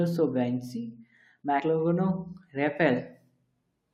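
At 1.6 s the speech jumps forward as compressed frames are skipped: roughly three frames of about 21.3 ms each go missing, so around 70 ms of audio never plays. The join shows as a short discontinuity in the waveform and spectrogram.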